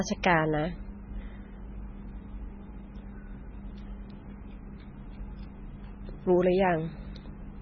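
From start to finish the speech carries heavy MP3 compression damage, most likely from an encode at a very low bitrate, on the order of 16 kbps. The treble stops abruptly at 6.6 kHz, where the encoder cut the band to save bits. Below that, weak frequency components drop in and out from frame to frame, giving a watery, swirling texture, metallic chirps on s sounds, and smeared consonant onsets.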